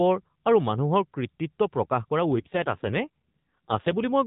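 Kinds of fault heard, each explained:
AMR rate drop: from 2.35 s to 4.02 s the speech turns rougher and more synthetic, with a buzzier texture, while the band stays below 4 kHz and nothing drops out. The coarser sound points to the mobile network stepping the AMR-NB codec down from its 12.2 kbps mode to around 5.9 kbps and spending the freed bits on error protection, as happens on a weak radio link. The rate recovers shortly before the end.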